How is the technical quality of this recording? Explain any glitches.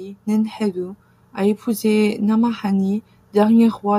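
No glitches can be heard anywhere in this recording.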